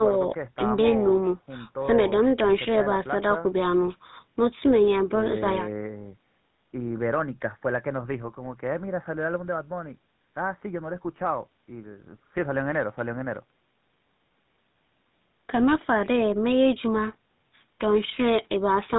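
GSM full-rate codec damage runs throughout: the regular-pulse excitation and 4 kHz ceiling, consistent with 13 kbps coding, give the speech a plainly audible buzzy, gravelly roughness.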